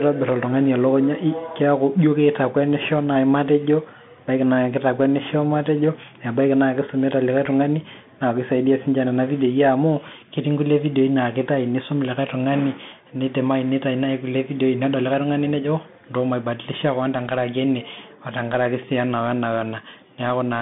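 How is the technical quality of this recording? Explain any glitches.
The recording's quality is limited by one fault that lasts the whole clip.

Bluetooth CVSD headset codec, throughout: the speech went through a narrowband headset link that codes each sample as a single up-or-down bit with a self-adjusting step size, which fits a 64 kbps CVSD stream. Only about 150 Hz to 3.6 kHz comes through, with nothing above 3.8 kHz, so the speech sounds thin and boxed in. The coding damage is plainly audible as scratchy s sounds and a granular hiss beneath the speech.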